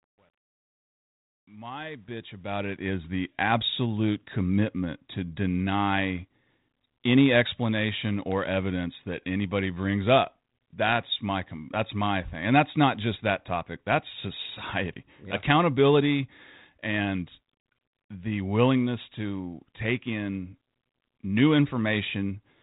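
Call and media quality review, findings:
Truncation distortion on fade-in, 0.00–2.93 s, worst to 2.12 s, before "the absolute commitment to": gritty texture. Waveform stair-stepped; spectrogram shows broadband grit. Undithered gain stage, fits 10-bit resolution.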